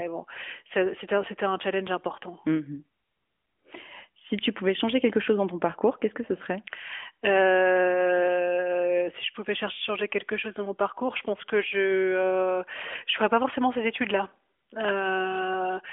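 No technical faults are audible.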